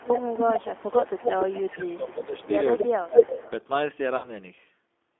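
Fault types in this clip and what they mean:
G.729 codec: 8 kbit/s speech coding throughout, confining the sound to about 250 Hz to 3.5 kHz, with plainly rough, synthetic texture; spectrograms show nothing above 3.5 kHz.
Echo leak: a delayed copy, about 262 ms late and only a little quieter than the direct sound, runs until 2.87 s, likely from an imperfectly cancelled loudspeaker path; spectrograms show repeated, offset harmonic patterns.
VoIP packet loss concealed by the speech codec: about 60 ms went missing near 4.17 to 4.29 s, which fits three 20 ms packets, and was bridged by a fading extrapolation of the preceding sound.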